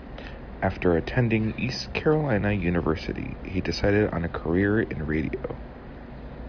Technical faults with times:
none

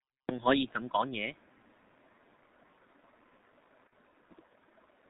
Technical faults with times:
0.00-5.10 G.723.1 codec

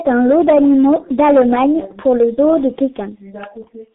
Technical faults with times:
0.00-3.94 G.723.1 codec

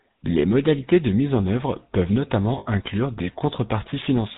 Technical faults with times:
0.00-4.38 GSM full-rate codec
2.58-2.67 lost GSM frames

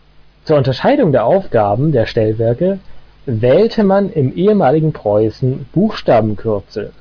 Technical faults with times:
none

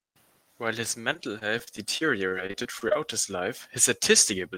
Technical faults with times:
1.01-2.96 repeated packet loss (robotic sound)

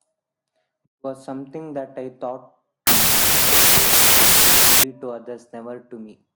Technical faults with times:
2.87-4.83 wrong sample width

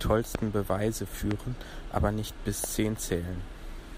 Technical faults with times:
0.35-0.37 loud pop
1.31-1.33 loud pop
2.64-2.66 loud pop

